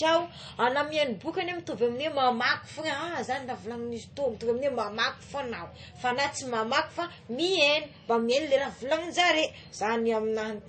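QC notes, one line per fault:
Throughout: low-bitrate audio saved at a high bitrate. The speech has nothing above 8.3 kHz and keeps dull, smeared low-rate MP3 coding, likely a 32 kbit/s encode re-saved near 192 kbit/s; the larger second file cannot restore detail the first discarded.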